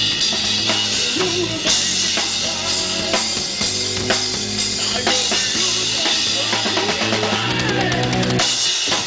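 Nothing in the audio stood out as a technical problem on listening.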